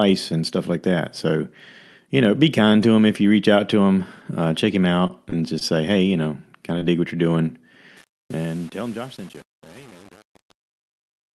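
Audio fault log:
5.07–5.12 s and 5.59–5.63 s: short stall from a late packet. Twice a packet arrived late and the jitter buffer ran dry. The receiver held the last sound for about 23 ms and then about 16 ms, and playback picked up where it left off, so nothing is lost. The held sound is stretched. On a spectrogram the harmonics run flat and unchanged for a moment. In the waveform, the held sound repeats before the signal resumes.
5.30–5.38 s and 6.79–6.83 s: short concealed packet loss. Each time about 20 ms of audio never reached the decoder. The receiver extended the preceding sound, about 23 ms of invented signal, then crossfaded into the real audio. At 5.30 s the patch also adds about 10 ms of extra length. The result is a brief smear or wobble. A spectrogram shows a blurred, slightly wrong stretch with a soft seam. The waveform has a smoothed segment that lacks fine detail.
7.97–11.35 s: truncation distortion on a fade. 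The fade-out begins near 8 s, and the gain stage keeps only about 7 bits with no dither. As the level drops toward the smallest step, the waveform breaks into coarse square stairs. It sounds gritty at the quiet end. A spectrogram shows a broadband grainy haze and scattered vertical flecks instead of a clean taper. The Opus call path limits the band near 12 kHz.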